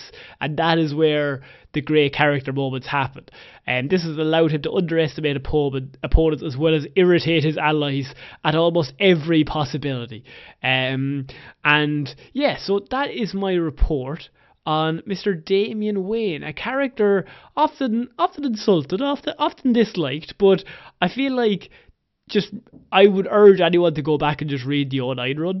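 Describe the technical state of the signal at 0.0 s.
At 0.0 s the signal is intact, with no audible fault at that moment.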